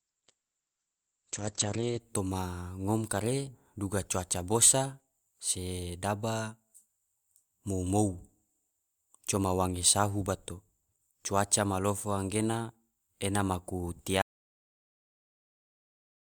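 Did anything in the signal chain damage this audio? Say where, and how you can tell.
Yes. For the first 2.0 s the speech sounds dull and smeared, with nothing above 8.2 kHz, then brightens abruptly without any gap. This is an adaptive stream starting at a low bitrate, with the network player opening on a thin encoding (consistent with Opus near 12 kbit/s) before switching to a fuller one, around 64 kbit/s.

At 14.22 s the speech cuts out mid-flow into dead silence, with no room tone, and stays silent to the end. This is an audio dropout to silence, most likely an input or link failure upstream of the encoder while the recorder kept writing silence.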